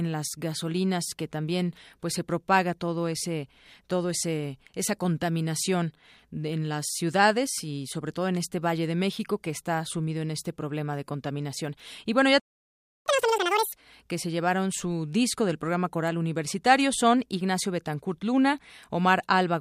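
At 12.40 s the speech just cuts out and stays silent until 13.06 s, a playback stall of about 0.66 s. The player likely ran dry of data or had its thread held up, so nothing reached the output until it recovered. Right after, from 13.06 to 13.73 s, you get catch-up at higher speed: the backlog is resampled to play at double speed, so the speech rushes by with pitch jumping up roughly ten semitones, chipmunk-like, before settling back to normal.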